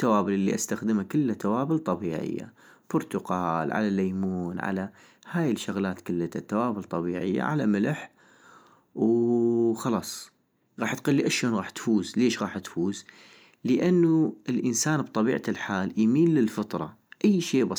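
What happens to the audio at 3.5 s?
Nothing goes wrong at 3.5 s; the speech runs through that point intact, with no dropout, click or other break in the sound.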